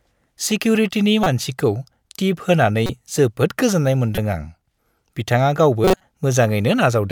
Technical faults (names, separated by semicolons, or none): corrupt frame decoded